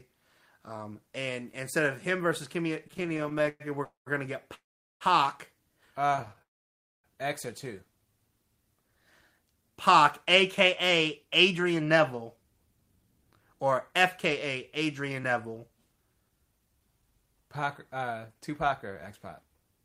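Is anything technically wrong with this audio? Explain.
Yes. The speech has three kinds of network-related fault.

Repeated stalls (stutter) occur from 2.85 to 3.62 s and from 6.07 to 6.42 s. The speech drags and catches. The first stretch has 21 brief holds, the longest about 108 ms, covering 40% of that span. The second has 11 shorter ones, none over 15 ms, covering 31%. Packets arrived slower than playback, so the jitter buffer kept running dry and the receiver stretched the last sound each time. Nothing is lost.

A call audio freeze occurs three times: 3.84 to 4.08 s (222 ms), 4.54 to 5.03 s (464 ms), and 6.42 to 7.06 s (617 ms), the last following straight on from the second stutter. Each time the sound hangs as a short decaying buzz or hiss, then falls silent for about 150 ms, 410 ms and 600 ms respectively before resuming where it stopped. The likely cause is packets held up in transit, emptying the buffer, which inserts gaps without dropping audio.

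Jitter buffer speed-up runs from 8.88 to 19.66 s. The speech sounds slightly hurried, about 108% of normal pace, with pitch unchanged. After the delays, the buffer held more audio than its target. To catch up, the receiver trimmed tiny pitch-period-sized slices over and over, around 0.7 s in total, shortening the audio without altering its pitch.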